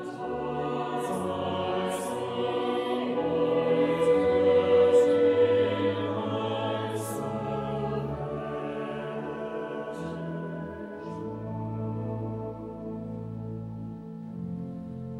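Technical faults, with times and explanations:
No technical faults can be heard in this clip.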